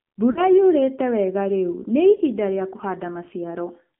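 The whole clip is speech through the AMR narrowband mobile codec. The line passes only about 150 Hz to 3.5 kHz. The voice sounds buzzy and synthetic, with plainly audible damage. That fits a low AMR-NB rate near 7.4 kbps, where few pulses drive the vocal tract model.

From 0.32 to 0.43 s, lost AMR speech frames make the sound smear and sag before "yuurĩĩtĩ wega rĩu nĩ". The gap fits two missing 20 ms frames. The decoder repeated old settings at falling gain. At 2.16 to 2.22 s, just after "yuurĩĩtĩ wega rĩu nĩ", a shorter warbling dip fits one lost frame.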